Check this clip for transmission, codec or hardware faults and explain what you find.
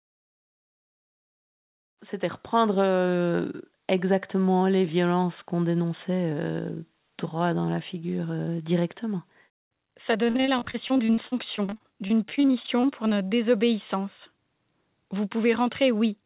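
One transmission fault is audible. Repeated packet loss (robotic sound) runs from 10.24 to 13.33 s: packets kept going missing or arriving late, and each hole was covered by extending the preceding audio. Dozens of short gaps, the longest 48 ms, leave about a quarter of that stretch concealed, so the speech turns choppy and robotic with fragments missing. The call path's 4 kHz upper limit fits G.711 mu-law at 64 kbps.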